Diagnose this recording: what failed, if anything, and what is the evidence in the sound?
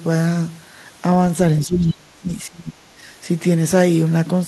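Call processing: from 1.65 to 2.77 s the speech drops around 30 dB, a collapsed waveform envelope, likely speech suppressed in double talk by echo cancellation.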